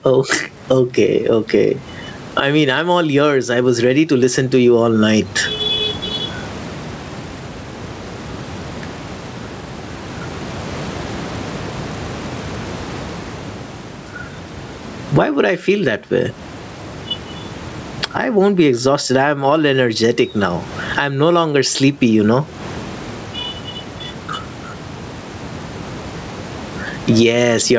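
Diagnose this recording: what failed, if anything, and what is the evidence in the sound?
Gain pumping runs through the whole speech recording. The level swings by around 25 dB. Loud and quiet passages sit unnaturally close together, and the sound is squashed. The likely cause is an input gain set far too high for the microphone, so a fast limiter or compressor in the call processing clamps down on every peak and releases in the gaps.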